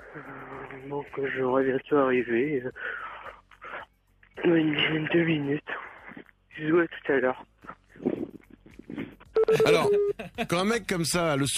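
No technical faults can be heard anywhere in the audio, and the signal holds steady throughout without any break or disturbance.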